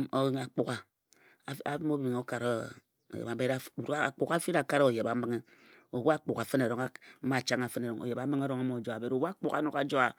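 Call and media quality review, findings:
Nothing to flag on this one; I listened through the speech and didn't hear any faults worth raising.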